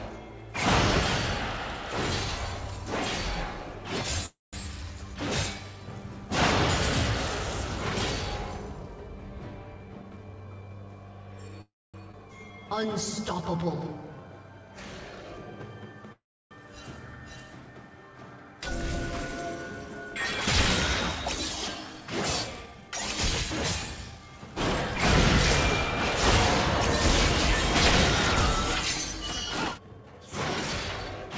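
A call audio freeze at 4.26 to 4.55 s stops the sound for about 0.27 s, with a fading tail and then roughly 0.18 s of near silence. Playback resumes where it left off, so nothing is lost. The likely cause is delayed packets draining the jitter buffer.

A jitter buffer speed-up from 9.75 to 10.83 s cuts short pitch-period slices to shed a backlog of about a third of a second. The audio runs at 124% speed with unchanged pitch and sounds noticeably hurried.

Another call audio freeze, at 11.61 to 11.96 s, holds for about 0.32 s, with roughly 0.25 s of it fading to silence before the sound picks up again.

A skip ahead at 12.12 to 12.15 s drops roughly 150 ms of audio. The two sides of the jump are stitched together almost directly, so the sound lurches forward.

A jitter buffer slow-down from 12.48 to 14.29 s repeats single pitch periods, adding 152 ms to rebuild a reserve. The sound plays at 92% speed, drawn out.

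A gentle jitter buffer speed-up runs from 15.10 to 24.55 s at 102%, trimming about a fifth of a second over that span. It makes the pace only slightly brisk.

Inside that stretch, a call audio freeze at 16.12 to 16.53 s inserts about 0.39 s, of which roughly 0.32 s is silent, before playback continues intact.

A final jitter buffer speed-up from 29.74 to 31.30 s removes about 0.4 s at 124% speed, rushing the closing sound. Throughout, nothing sounds above 8 kHz, which fits a G.722 call path at 64 kbps.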